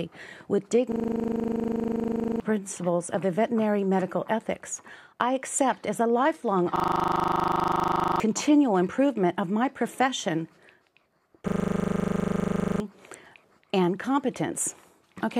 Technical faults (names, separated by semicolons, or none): system hang loop